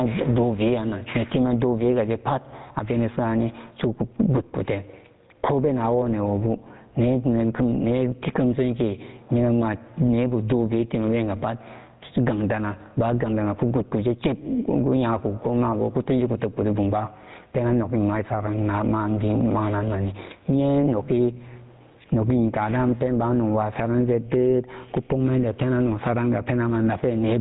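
Speech runs through the whole clip with gain pumping from start to finish, with the gain swinging by around 15 dB. The likely cause is an input gain set far too hot, with a fast limiter or compressor clamping down on every peak and releasing in the gaps. That flattens the difference between loud and quiet passages and leaves the delivery sounding squashed. Layered over this is GSM full-rate codec damage, plainly audible throughout. The codec rebuilds the signal from a vocal-tract model excited by a sparse, regularly spaced pulse train, and that coarse excitation gives the speech its buzzy, gravelly grain. The character fits the 13 kbps full-rate coder. The band stops at 3.9 kHz, so sibilants and upper harmonics are missing.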